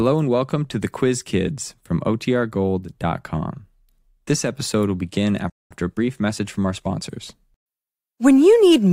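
At 5.50 s, just after "episode will begin", there is a playback stall, most likely because the player ran short of buffered data or its output thread was held up, so nothing reached the output. The speech cuts off abruptly and there is silence for about 0.21 s, until 5.71 s. The speech then resumes rather than trailing off, which is what you hear when the output is starved in mid-flow.

From 5.71 s to 7.09 s the player works off the backlog built up during the stall with time-compressed catch-up. It drops small slices of audio and cross-fades across each gap, so the speech runs about 1.15 times faster than normal while the pitch stays the same. The result is speech that sounds rushed for roughly 1.4 seconds before normal pacing returns.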